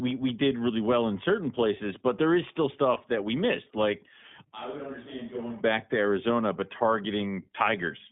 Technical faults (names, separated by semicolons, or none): iLBC codec; lost iLBC frames; switch to a distant microphone